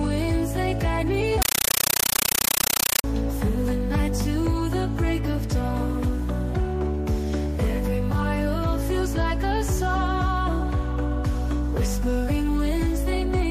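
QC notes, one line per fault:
1.42–3.04 s, compressed stream played as audio: an AC-3 bitstream reached the output undecoded and was read as plain samples. Each frame becomes a 9.33 ms noise burst and then silent padding, repeating 31.25 times a second, as very loud chattering static that fits a 448 kbps stream.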